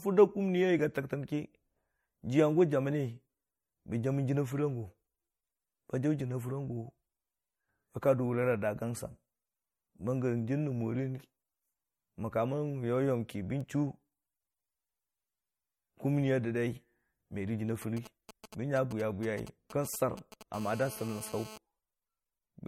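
All the way through, the speech has a plainly watery, swirly edge with nothing above 18.6 kHz, likely MP3 compression at a low bitrate, around 44 kbps. From 17.82 to 20.43 s come GSM signalling bursts: a nearby phone's radio pulses get rectified into a galloping dit-dit-dit of short 217 Hz buzzes, a fair way under the speech. Then from 20.54 to 21.58 s there's steady GSM phone buzz, a hard, raspy 217 Hz tone full of harmonics, about 17 dB below the speech.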